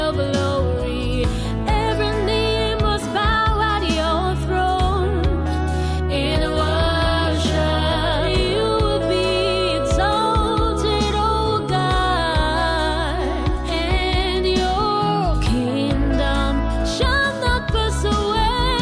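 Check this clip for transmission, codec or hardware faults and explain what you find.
No faults can be heard anywhere in the clip. Nothing in the sound points to a problem in the chain that carried or captured it.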